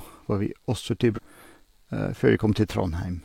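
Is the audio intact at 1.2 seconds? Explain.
No. Just after "vi også", from 1.13 to 1.19 s, damaged data in the compressed stream throws the decoder out of sync while it hunts for the next frame header. The result is a brief glitch in the speech.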